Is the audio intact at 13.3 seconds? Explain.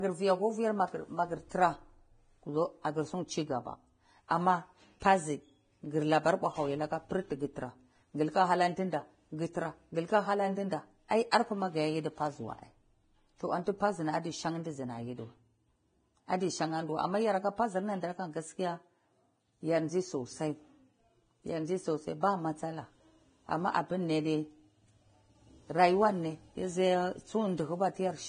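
No. At 13.3 seconds the speech carries Vorbis compression damage, present from start to finish rather than at that moment alone. Nothing survives above 9.7 kHz, and the treble below that limit is heavy with hiss and grain, with consonant onsets smeared. This most likely comes from low-quality Vorbis encoding, consistent with a bitrate in the low twenties of kbps. The encoder trimmed the top band and quantised the remaining high-frequency detail so coarsely that it was rebuilt as noise of similar energy.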